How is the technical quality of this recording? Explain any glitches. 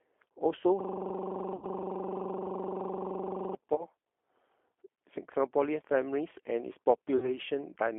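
The recording has two problems: the whole clip is coded through a narrowband G.729 speech codec, and three short glitches come from VoIP packet loss that the codec had to conceal.

The G.729 codec, here its 8 kbit/s G.729A form, runs for the entire clip. It does not carry the waveform. Instead it sends a vocal tract filter, a pitch predictor and a few pulses for each 10 ms frame, and the decoder resynthesises the speech from those. The telephone line keeps only about 250 Hz to 3.4 kHz, so the speech sounds boxed-in and lacks low body and high air. The codec damage is plainly audible as a rough, slightly synthetic texture.

The VoIP packet loss concealed by the speech codec occurs at 1.56–1.65 s, 3.76–3.84 s and 7.18–7.38 s. Audio went missing in each case: about 60 ms, which fits three lost 20 ms packets; 20 ms, which fits one; and 40 ms, which fits two. The decoder filled each gap by extending its last pitch and filter settings while lowering the gain. 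These spots sound like a brief smeared buzz or tonal blur that fades. Each frame is built on the previous one, so the speech stays weak or distorted for a short stretch afterwards.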